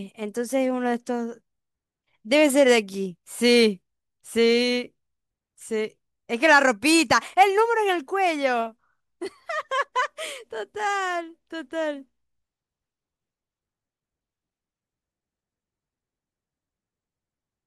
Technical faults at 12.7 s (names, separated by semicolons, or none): none